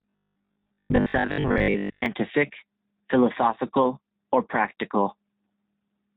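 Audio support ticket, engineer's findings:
Robotic sound from repeated short buffers, 0.02–2.06 s. Rigid metallic buzz locked at 50 Hz, loosely tracking the speech. Likely cause: receive buffer starved, a 20 ms block replayed while most new audio is skipped. Fixed pitch distinguishes it from codec roughness.

G.729 codec damage, whole clip. Band-limited, nothing above 4 kHz. Plainly audible rough, synthetic texture, consistent with 8 kbit/s G.729A pulse-based reconstruction. Unlike the buffer fault, there is no fixed-pitch buzz and no skipped audio.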